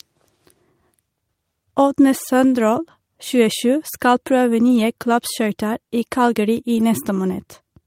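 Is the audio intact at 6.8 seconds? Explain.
No. A lost packet rebuilt from error correction runs from 6.75 to 6.81 s, which fits two lost packets. The following packets carried low-bitrate copies that the decoder played instead, so the speech has no gap but sounds rougher and noisier there.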